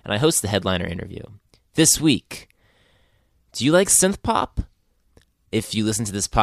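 No technical faults can be heard anywhere in the recording, and the signal stays steady and intact for its whole duration.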